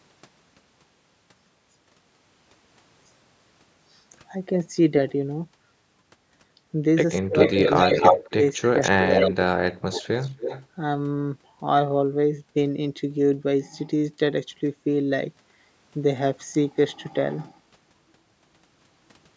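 From 7.21 to 9.96 s, speech suppressed in double talk: the level repeatedly dips and cuts out in pieces, about a second and a half in all, falling by around 40 dB at the deepest point. This is likely an echo canceller turning down the talker while both sides spoke. On a waveform these appear as sudden collapses in the envelope. On a spectrogram they are vertical gaps where the harmonics vanish.

Overlapping this, echo leak sounds like a delayed copy of the voice, likely residual loudspeaker echo that the canceller failed to remove. It occurs from 7.38 to 8.3 s at a 262 ms delay and somewhat louder than the speech, from 8.83 to 9.31 s at 267 ms and level with it, and from 9.92 to 10.67 s at 271 ms and much fainter. On a spectrogram it shows as a repeated harmonic pattern trailing the original by about 0.27 s, below the 8 kHz ceiling of the call microphone processing.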